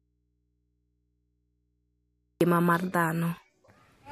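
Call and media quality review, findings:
Audio dropout to a faint residue, 0 to 2.41 s, under way at start: speech absent, only hum about 50 dB down. Likely dead input path. Waveform flat, spectrogram shows thin mains lines until abrupt return.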